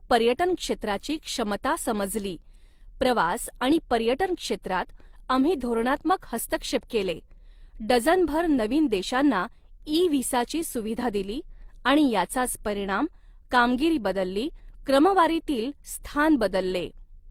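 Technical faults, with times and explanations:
Throughout: transcoding between lossy codecs. The speech carries two kinds of coding artefact at once. It points to an HE-AAC encode near 48 kbit/s, likely re-encoded as Opus near 32 kbit/s, which spends bits re-coding earlier artefacts.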